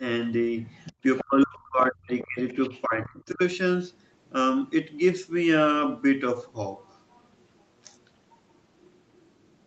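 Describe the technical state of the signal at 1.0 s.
Other side's voice leaking through, from 0.82 to 1.25 s: a second voice sits underneath the talker, about 15 dB quieter. It is likely loudspeaker echo of the far end that reached the microphone and was not fully cancelled, so part of the remote talker comes back in this signal. Like everything in the clip, it is band-limited to 8 kHz by the call path.

Speech suppressed in double talk, from 0.92 to 2.38 s: the talker's own voice dips and breaks into pieces, falling at its deepest by roughly 40 dB, with about a second of the span affected in total. This is likely the echo canceller treating the overlap of both sides as echo and turning the whole signal down, so the near talker is attenuated along with the leak.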